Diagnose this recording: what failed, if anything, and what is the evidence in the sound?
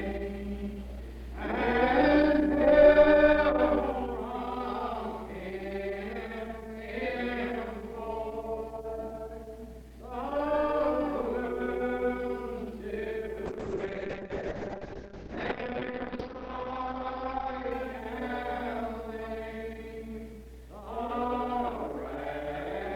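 A call bitrate drop hit the codec stage from 13.46 to 19.51 s. The sound turns rough and watery, its top end falling from 20 kHz to 6 kHz. The bandwidth estimate fell and the encoder coded coarsely, which fits a drop from 64 to 6 kbps.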